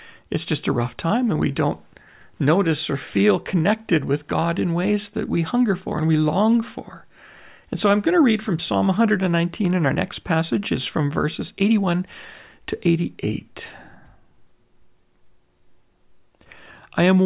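No technical faults can be heard anywhere in the recording; the signal stays intact and continuous throughout the speech.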